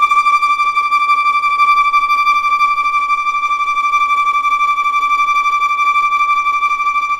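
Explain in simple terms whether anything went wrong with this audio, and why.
Block size mismatch (truncated), throughout: one stage hands over longer chunks, which fits 1024-sample blocks, than the next accepts, clipping each end and causing a steady buzz near 43 Hz.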